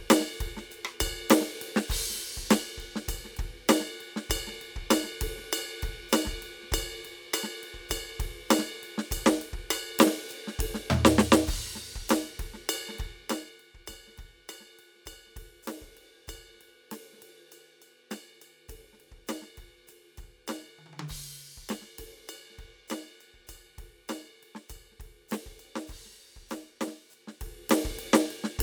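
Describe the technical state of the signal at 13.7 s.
At 13.7 s the music signal is intact, with no technical fault audible at that moment.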